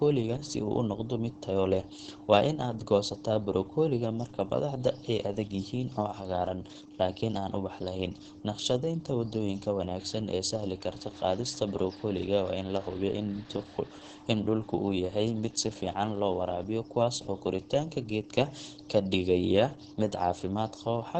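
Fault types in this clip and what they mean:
Opus voice compression: Throughout, the speech sounds muffled, hoarse and faintly robotic, with nothing above about 8 kHz. That points to Opus in its SILK linear-prediction mode at a very low bitrate, around 10 kbps, which narrows the band to wideband and codes the excitation coarsely.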